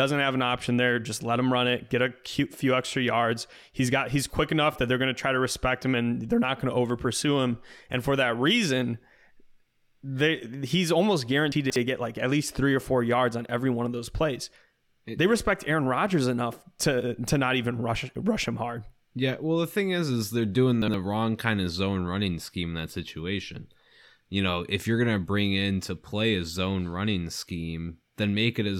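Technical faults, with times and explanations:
11.52–11.76 s, chunks out of order: after "they he's almost", a 60 ms piece plays three pieces late, so the speech jumbles at three hard joins before "get like at least".
20.82–20.94 s, chunks out of order: after "is is they're doing", one 60 ms piece lands a single slot late, swapping two pieces and leaving a brief stumble before "wrong kind of zone".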